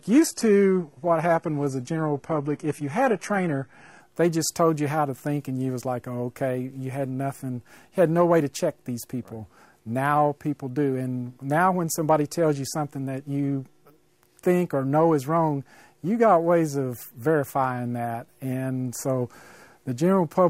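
For the first 4 seconds the clip has the sound of an adaptive stream starting at a low bitrate. The top end is thin and artificial, the kind of synthesised treble you get from a very low-rate HE-AAC encode around 16 kbit/s, with stronger codec artefacts. Once the player has measured the connection it steps up, and at 4.0 s the quality jumps cleanly to something like AAC-LC at 96 kbit/s, with no gap at the switch.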